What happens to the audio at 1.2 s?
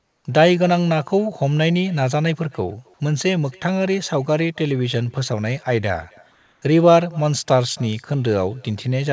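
At 1.2 s you're hearing echo with no canceller, and it runs through the whole clip: the far end's loudspeaker feeds its mic and nothing strips it out, so the speech returns about a third of a second later as a faint, thin shadow, roughly 28 dB down.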